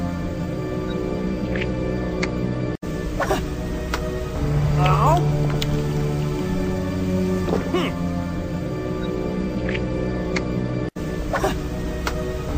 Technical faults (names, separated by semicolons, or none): DAB burbling